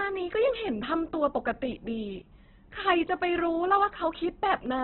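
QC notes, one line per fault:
Throughout, Opus compression: the whole clip is cut off at about 4.1 kHz, so the speech sounds narrowband, muffled and flat, and what's left is grainy and rough rather than swirly. That fits an Opus encoder in its music (CELT) mode starved of bits, likely at a very low rate around 8 kbps, where it holds the band energies but fills the detail with folded or noise-like content.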